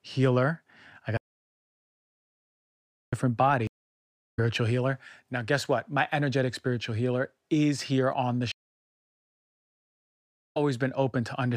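At 1.17 s the speech stops dead and stays silent, with no room tone, until 3.13 s. The roughly 1.95 s that should fill that gap are simply gone. This is an audio dropout to silence, likely caused by the input being lost, through a disconnected device, a failed link or an accidental mute, while the recorder kept writing silence.

Two stream reconnects follow. From 3.67 to 4.39 s there is a further silence, and when the speech returns it has jumped ahead by roughly 0.7 s. Between 8.52 and 10.57 s the audio goes silent again, and this time it resumes about 1.5 s further on. Each time the connection broke, the player fell quiet, reconnected and started a new decoder partway through the stream. The speech it would have played during the outage was never delivered, so it picks up at a later point in the stream.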